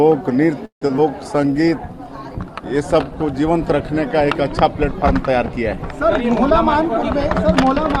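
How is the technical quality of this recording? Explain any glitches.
The recording has several network-related glitches clustered in its first few seconds.

From 0.65 to 0.83 s the audio halts in a call audio freeze, likely caused by packets arriving late and the jitter buffer running dry. The last sound is stretched into a fading buzz, then about 120 ms of silence, and the audio resumes where it stopped, now about 160 ms later. On a spectrogram it looks like a smeared band decaying into an empty vertical strip.

Right after that, at 0.87 to 0.91 s and 0.97 to 1.00 s, there are two short concealed packet losses. About 20 ms and then 40 ms of audio never arrived, so the decoder extrapolated briefly and crossfaded back. The second one also trims roughly 30 ms of accumulated delay. Each is heard as a small smear or wobble, and shows as a brief blurred patch.

From 1.24 to 3.19 s a call bitrate drop lowers the coding rate from 64 to 28 kbps, where it stays for 1.84 s. 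The encoder codes more coarsely and narrows the audio band from 20 kHz to 12 kHz, so the sound turns duller and watery. A spectrogram shows the top cut flat at 12 kHz for that stretch.

Inside that, from 1.36 to 1.54 s, a jitter buffer slow-down repeats pitch periods to rebuild the buffer's reserve. It adds 36 ms and plays at 83% speed without a change in pitch, so sounds drag. On a spectrogram the harmonics appear horizontally stretched, with repeated identical cycles in the waveform.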